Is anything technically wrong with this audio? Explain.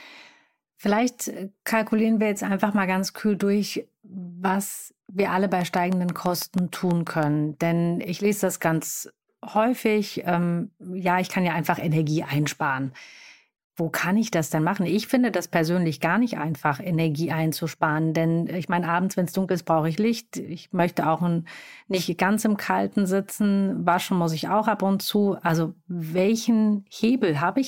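Yes. A train of clicks runs from 5.61 to 7.24 s, just after "was wir alle bei": about ten evenly spaced pulses at 6.2 per second, likely from electrical interference or a faulty connection or power supply, ticking around 10 dB above the speech.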